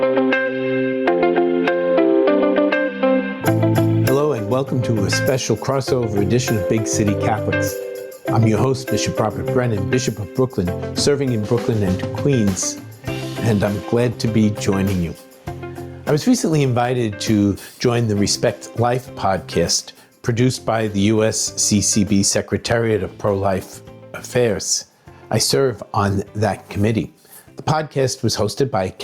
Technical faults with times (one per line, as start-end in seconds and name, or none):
0.00-29.03 gain pumping